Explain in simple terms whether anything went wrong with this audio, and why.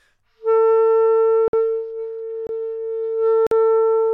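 The audio has three short blocks of digital silence, around 1.48, 2.47 and 3.47 s, each a dropout of about 23 to 53 ms, likely where the program missed filling its buffer in time.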